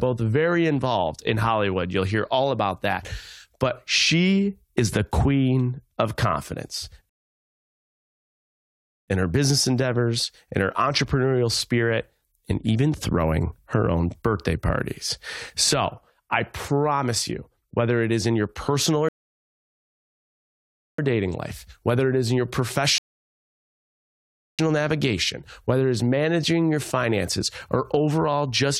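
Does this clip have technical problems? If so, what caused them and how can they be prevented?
Yes. The clip has three rebuffering stalls. Each time, the player ran out of downloaded audio and halted playback until more data arrived. The sound cuts to silence and then resumes exactly where it stopped. Nothing is skipped, but time is added: 7.09 to 9.08 s (2.0 s), 19.09 to 20.99 s (1.9 s), and 22.98 to 24.59 s (1.6 s). A larger playback buffer, combined with adaptive streaming that drops to a lower bitrate when throughput falls, would prevent these stalls.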